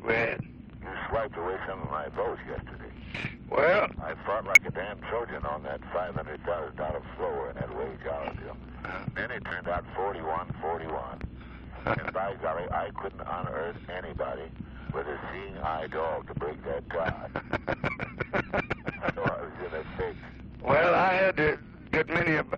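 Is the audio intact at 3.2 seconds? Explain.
No. Between 3.14 and 3.20 s, compressed frames are skipped: whole frames never reach the output, so the sound jumps ahead by roughly 70 ms. Unlike a dropout, there is no silent gap.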